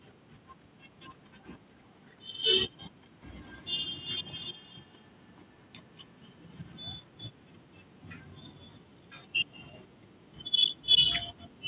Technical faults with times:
3.18-6.77 feedback echo between two devices

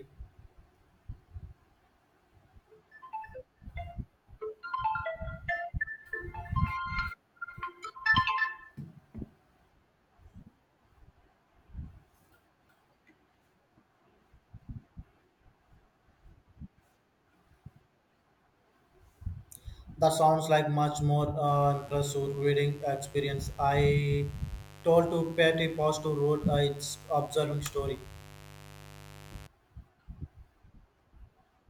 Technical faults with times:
21.47-29.47 mains buzz

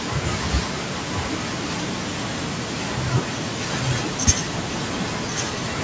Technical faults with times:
0.00-0.21 echo leak

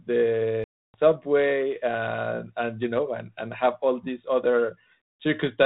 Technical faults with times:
0.64-0.95 packet loss on an ADPCM call

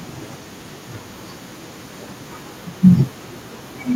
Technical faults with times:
0.00-3.96 echo leak

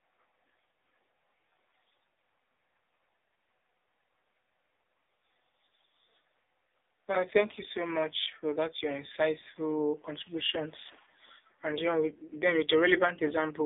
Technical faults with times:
0.00-13.65 AMR narrowband mobile codec

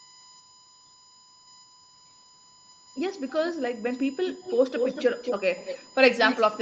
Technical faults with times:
0.00-6.62 USB whine
3.28-3.54 echo leak
4.28-5.83 echo leak
6.22-6.44 echo leak

